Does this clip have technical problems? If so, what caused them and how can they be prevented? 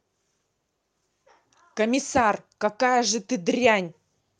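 No, nothing technical stands out in this speech clip, so there's nothing here that needs fixing or guarding against.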